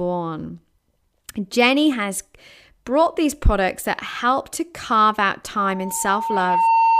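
A single steady tone near 908 Hz appears at 5.56 s, right after "help to carve out". Over roughly a second it swells into a piercing squeal that sits a few decibels above the speech and holds until the clip ends at 7.00 s. This is loudspeaker feedback squeal. The microphone was picking up the loudspeaker it was driving, and at 908 Hz the loop gain rose above one, so that frequency kept reinforcing itself and grew.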